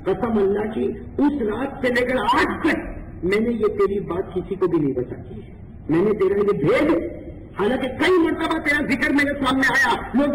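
Throughout the clip, the sample rate was raised by joining samples with straight lines, which fits an original rate near 12 kHz. This imaging from linear upsampling dulls the top of the band and leaves a mirrored copy from 6 to 12 kHz, about 30 dB down, heard as a faint metallic shimmer.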